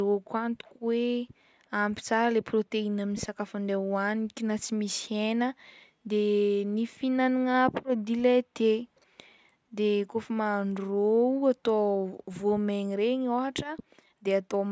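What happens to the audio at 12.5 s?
Nothing goes wrong at 12.5 s; the speech plays through that moment intact, with no dropout, click, distortion or other fault.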